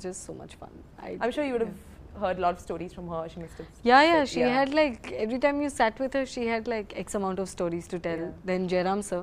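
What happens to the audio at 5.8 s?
Nothing goes wrong at 5.8 s; the audio runs straight through that point with no dropout, click, glitch or other fault.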